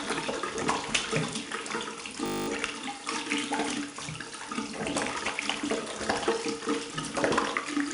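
A gritty hiss rides on every louder moment of these everyday sounds from start to finish, with roughness on sharp attacks and nothing above about 10.6 kHz, so the top end is dull. This is 4-bit ADPCM compression: each sample is stored as a coarse step from a predicted value, and the quantisation error rises and falls with the signal's level. The step size lags behind sudden transients, which roughens attacks. The damage is plainly audible, consistent with roughly 89 kbps.

From 2.26 to 2.48 s the sound becomes a steady, mechanical buzz at 50 Hz. A single 20 ms slice repeats exactly, eleven times. This is a system hang loop: the computer or its driver froze, and the audio hardware kept replaying the same small ring buffer. Because the loop is so short, the repetitions fuse into a pitched drone rather than a stutter. When normal playback resumes, almost no audio is missing.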